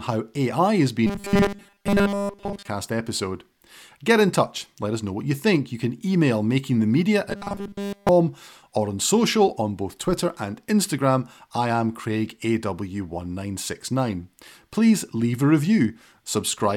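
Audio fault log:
1.07–2.67 s and 7.30–8.09 s, robotic sound from repeated short buffers: the speech turns into a stiff metallic buzz pitched at 200 Hz, still loosely tracking the words. The cause is likely fresh audio arriving too late, so playback keeps looping the last fragment of roughly 5 ms, matching the 200 Hz pitch, while real audio is dropped. In the first span most of the sound is replaced this way; in the second, all of it.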